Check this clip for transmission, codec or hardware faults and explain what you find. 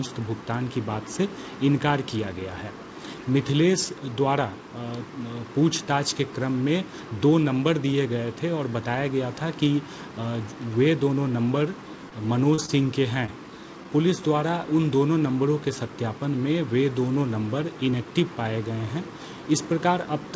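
Four brief dropouts cluster between 12 and 13.3 s, each a short concealed packet loss. The audio has travelled a call path, with nothing above 8 kHz, which fits a wideband codec such as G.722 at 64 kbps.

The short concealed packet losses fall at 12.09–12.13 s, 12.55–12.60 s, 12.66–12.70 s and 13.26–13.30 s. About 20 ms went missing each time, and the receiver extrapolated the preceding sound before crossfading back. Each one is heard as a brief smear or wobble. On a spectrogram, harmonics run unnaturally flat or blurred for a moment, and where the sound was voiced the waveform shows a repeated, smoothed cycle.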